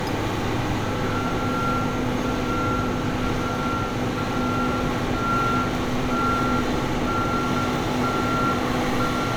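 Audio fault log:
No audible faults are present in this recording of sounds.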